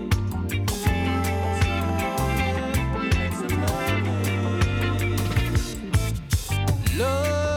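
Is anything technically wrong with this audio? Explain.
Yes. Two isolated sharp clicks occur, at 0.89 s and 1.89 s, most likely dropped samples. A tiny stretch of the stream, well under a millisecond, seems to be missing, so the waveform steps abruptly from one value to a later one instead of continuing smoothly. Far too brief to remove any sound, each gap is heard only as a single tick. On a spectrogram each shows as a thin vertical line spanning all frequencies; on the waveform, as a sudden discontinuity.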